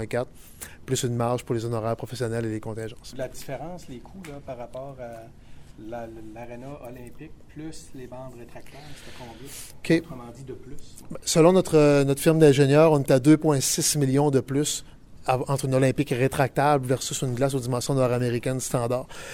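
No technical faults can be heard anywhere in the audio.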